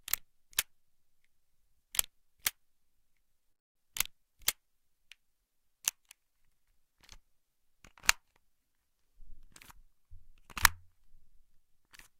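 At 3.51 s the audio cuts out until 3.77 s, a gap of about a quarter second. This is a long network dropout, likely from packets that never arrived. About 240 ms of the original sound is missing. The receiver briefly stretches the last sound into a fading buzz or hiss. Then near-silence remains for most of the gap. When the sound returns, it jumps ahead. The lost portion is never heard.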